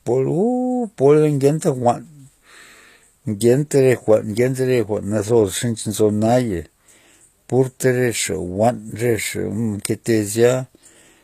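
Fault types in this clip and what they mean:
HE-AAC compression: Plainly audible coding damage runs through the speech. S sounds turn gritty and metallic, and nothing sits above 14.9 kHz, which fits HE-AAC at about 24 kbps as the likely cause. Unlike a simple low-pass, the treble stays bright but is rebuilt, so its harmonics don't line up.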